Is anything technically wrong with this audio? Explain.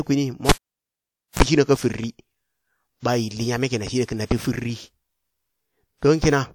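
Yes. Cable pulled and plugged in, 0.49 to 1.43 s: a live connector breaks contact with a pop, leaving near silence for about 0.88 s; as it reseats, the bare tip picks up a 34 ms burst of 60 Hz mains buzz, then another pop restores the speech at "shina ka firi".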